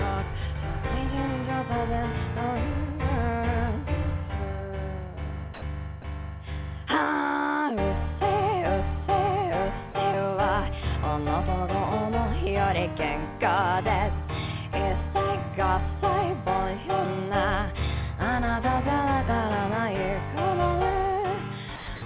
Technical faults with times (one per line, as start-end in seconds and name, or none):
5.54-5.62 sound dropped by the voice detector
6.02-6.04 sound dropped by the voice detector
9.92 sound dropped by the voice detector
21.76-22.02 sound dropped by the voice detector